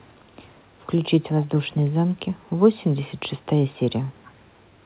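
A faint, delayed copy of the speech trails it by about 0.42 s, very quiet (roughly 25 to 40 dB down), from 0.0 to 0.87 s, 1.42 to 1.49 s, 1.74 to 2.76 s, 3.15 to 3.2 s, 3.39 to 3.46 s, 3.73 to 3.92 s and 4.08 s to the end. This echo leak likely comes from a far-end loudspeaker whose echo canceller let some of the sound back through, heard within the narrow band of a call path with nothing above 4 kHz.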